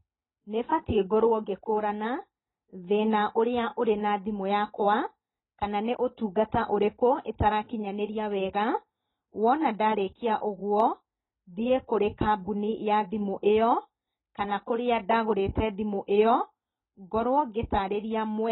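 AAC compression, throughout: the speech stops at 4 kHz and sounds dull, smeared and warbling, likely from heavy AAC-LC quantisation consistent with a bitrate near 16 kbps.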